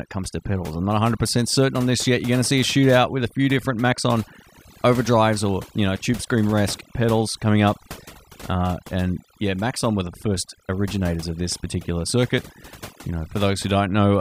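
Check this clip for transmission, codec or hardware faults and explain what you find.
One fault runs through the whole recording: overdone noise removal. A noise reducer set far too aggressively pulls individual frequency bands down or shuts them off whenever they sit close to its noise estimate, and the quieter parts of the speech fall below that line along with the noise. The background drops to near silence dotted with twinkling specks. Unlike a low-bitrate codec, nothing here is band-limited or smeared in time. The damage follows level, gating away whatever is quiet.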